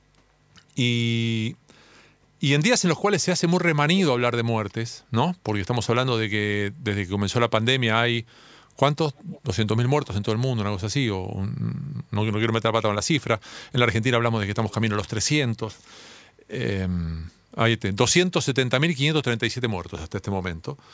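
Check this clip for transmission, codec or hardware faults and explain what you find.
Two short faults are audible, both echo leak. From 9.16 to 9.41 s and again from 14.7 to 14.75 s, a faint delayed copy of the speech trails the original by about 286 ms and 304 ms, roughly 25 dB down. The likely cause is a loudspeaker-side echo canceller leaving residual microphone pickup that returns down the line. The band-limiting at 8 kHz comes from the call's microphone processing.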